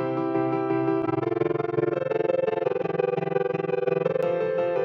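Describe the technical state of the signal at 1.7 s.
Overlap-add ripple spans 1.02 to 4.25 s. Mismatched frame overlap swings the level by about 60 dB around twenty times a second, giving a rough flutter. The waveform shows a pulsing envelope, and the spectrogram shows evenly spaced vertical stripes.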